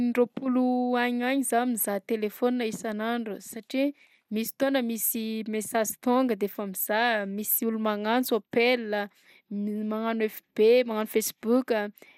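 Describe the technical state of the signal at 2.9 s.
At 2.9 s the speech sounds dull and plainly gurgling, with a granular roughness and nothing above 16.4 kHz, as across the whole clip. This is likely MP2 compression: too few bits, consistent with about 80 kbps, leave upper sub-bands switched off and the rest coarsely quantised.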